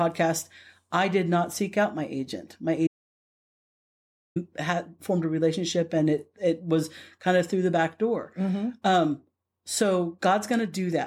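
At 2.87 s the speech cuts to silence, an audio dropout to silence lasting about 1.5 s, until "had formed a relationship" resumes at 4.36 s. The input was likely lost while silence kept being written: a flat waveform line and a blank spectrogram band, with no room tone.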